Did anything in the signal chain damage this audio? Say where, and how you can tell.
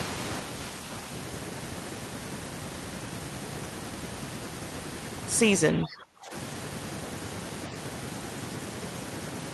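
Yes. From 5.72 to 6.33 s the speech sinks by up to about 25 dB, which is speech suppressed in double talk. The likely cause is the call-processing echo canceller turning down the near talker while the far side spoke.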